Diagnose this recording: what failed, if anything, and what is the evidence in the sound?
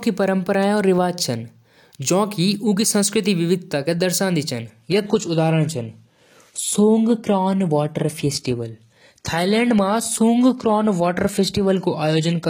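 From 4.66 s onward the speech abruptly turns dull and synthetic without a gap: an adaptive stream at a lower bitrate after the network slowed.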